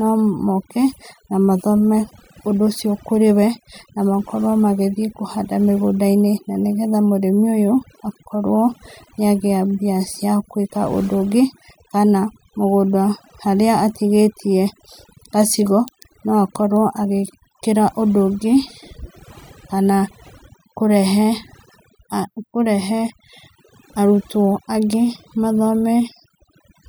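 From start to finish the background sits in near silence, broken by twinkling specks, while the softer parts of the voice drop away. This is overdone noise removal: a noise reduction stage set far too strong pulls individual frequency bands down or out whenever they come close to its estimate of the noise, so the quieter detail of the speech is stripped along with the noise.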